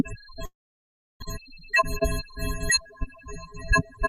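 At 0.45 s the sound cuts out and stays gone until 1.24 s. That's most likely a long network dropout. The receiver stretches the last bit into a fading buzz or hiss, then sits in near-silence for about 0.68 s, and roughly 0.66 s of material never comes back.

From 1.34 s to 3.07 s the audio runs about 5% fast at unchanged pitch, so it feels a little hurried. That's a jitter buffer speed-up: the receiver trims tiny pitch-period slices over and over to claw back around a tenth of a second of built-up delay.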